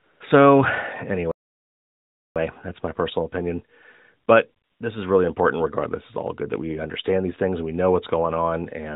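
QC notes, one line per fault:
0.00–0.20 s and 4.64–4.80 s, AMR comfort noise: The real background drops out and a steady, smooth hiss takes its place, for about 195 ms at the start and 160 ms later. The phone judged these moments silent and sent no speech frames. The receiver then made up noise from a rough sketch of level and spectrum. That is why the texture switches abruptly. It sits within the same 4 kHz narrowband limit as the rest of the AMR-NB sound.
1.31–2.36 s, playback stall: The audio stops mid-flow and goes fully silent for about 1.04 s. Then it resumes. This is not a pause in the talking. The output itself simply halts. The likely cause is that the player ran short of data or its thread was blocked, so nothing reached the output until it caught up. A gap this long is plainly audible as a break.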